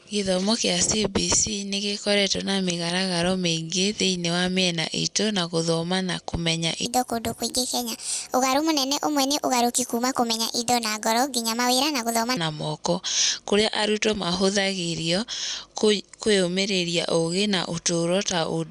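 From 6.86 to 12.37 s, a wrong sample rate fault plays the speech 1.45 times too fast, raising pitch about 6.5 semitones, which fits 22 kHz audio played at 32 kHz. It sounds high and hurried. Spectrogram harmonics and formants jump upward, and waveform cycles pack tighter.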